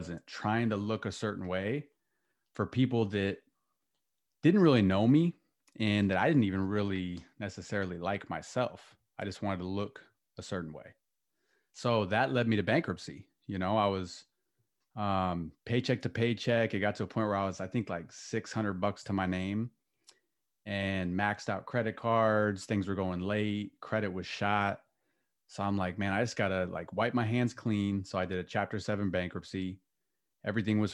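No technical faults can be heard anywhere in the speech recording; the signal stays continuous and steady throughout.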